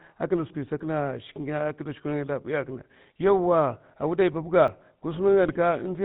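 GSM full-rate codec coding runs through the whole of this speech recording. The voice has a buzzy, gravelly roughness because the codec rebuilds it from a vocal-tract model driven by sparse regular pulses and passes nothing above 4 kHz. The plainly audible damage fits the 13 kbps full-rate mode. A dropped buffer (overrun) is heard at 0.80 s and again at 4.68 s as a small jump in the sound and no gap. A few milliseconds of audio were likely overwritten before the program collected them, so the surrounding audio was spliced directly together. GSM bit errors hit from 5.43 to 5.58 s, where the voice breaks into squawks and gargling. Corrupted filter, pitch and gain values reached the decoder across several consecutive frames, bending the spectrum and throwing the level around for that stretch.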